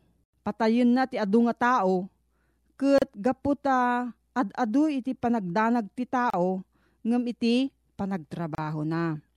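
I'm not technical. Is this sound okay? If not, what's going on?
No. The speech has three brief dropouts, each about 32 to 34 milliseconds, at 2.98, 6.30 and 8.55 seconds. This is a gap at a join of encoded pieces: separately encoded sections were stitched together with their built-in padding silence left in, so the speech briefly drops out, then continues where it left off.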